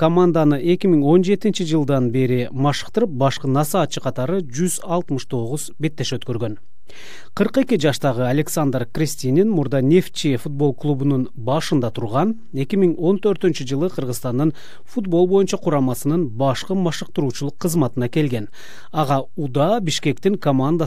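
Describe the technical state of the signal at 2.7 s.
At 2.7 s the signal carries a DC offset, present throughout the clip. The whole waveform sits shifted from zero by a constant of about -28 dBFS. It cannot be heard directly. It eats headroom and shows as steady energy at the bottom of the spectrum.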